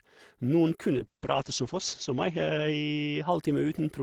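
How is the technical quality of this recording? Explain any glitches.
There's one real problem here, a call bitrate drop from 0.99 s to 3.61 s. The encoder got squeezed, which sounds like roughly 32 kbps falling to about 8 kbps for around a second. Coarser coding plus a treble cutoff near 8 kHz makes the speech muffled and watery until it recovers.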